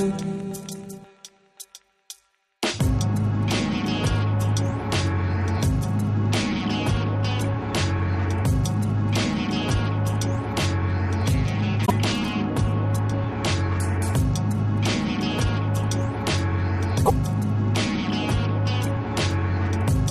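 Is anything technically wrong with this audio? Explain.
Yes. There are repeated frames at 11.85 s and 17.05 s. A short block of compressed audio is decoded twice, so about 52 ms and then 78 ms replay as a stutter. The lengths fit two and three codec frames, each adding that time to the audio.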